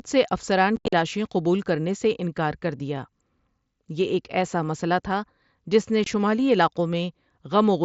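Speech carried over a wideband mSBC Bluetooth headset link shows unconcealed Bluetooth headset packet loss. From 0.76 to 0.93 s, about 128 ms of audio drops out in abrupt holes, the longest near 68 ms. At 6.04 s a further 23 ms hole appears. Missing packets were replaced by silence or an idle pattern.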